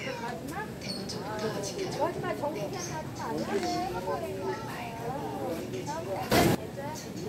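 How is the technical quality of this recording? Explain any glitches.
There's one real glitch, a sudden gain jump near the end, from 6.32 to 6.55 s. For about a quarter of a second the whole signal leaps up by roughly 16 dB, background noise included, then drops back just as abruptly. Because sound and noise rise together in a single step with no fade, the cause is likely a digital gain change applied instantly, a level setting or bit shift switched in and out with no ramp to smooth it.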